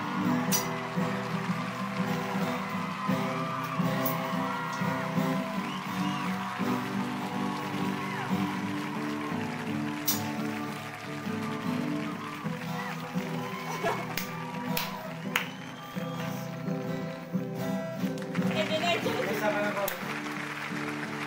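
From 13.88 s to 19.0 s, a series of short, evenly spaced ticks breaks into the sound, one every 1.02 s. Each is a brief hole of roughly 2 ms where the audio drops to silence and then resumes. These are periodic USB or driver dropouts: something stalled the USB bus or the audio driver at a fixed interval, and each stall cost a sliver of audio that was filled with silence, producing the regular clicks.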